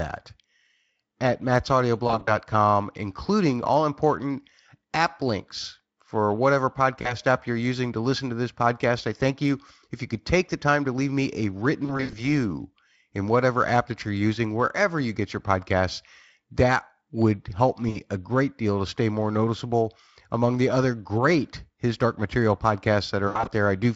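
At 2.07, 7.01, 11.85, 17.89 and 23.27 s the speech briefly smears into a buzzy tone or a coloured noise that fades, and returns thin for a moment. This is VoIP packet loss concealed by the speech codec. Each gap covers 40 to 160 ms of missing audio. The worst comes after "to leave me a", with runs up to 80 ms, and another falls between "app links for whatever" and "app you're using to". The decoder filled lost frames by stretching its last pitch and filter with falling gain.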